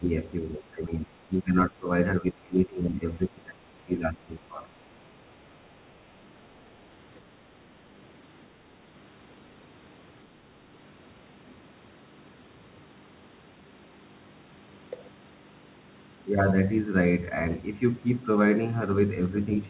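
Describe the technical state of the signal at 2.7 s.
At 2.7 s the speech sits inside a stretch of speech suppressed in double talk, running from 2.21 to 3.63 s. The level drops in pieces, at worst by about 25 dB, and about a second of the span is affected. The likely cause is an echo canceller that could not tell the near talker from loudspeaker echo while both sides spoke, so it turned everything down. The audio stays band-limited to 4 kHz throughout.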